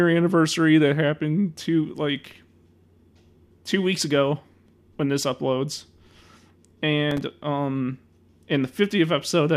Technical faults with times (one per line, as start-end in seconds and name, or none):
7.11-7.31 processor overload crackle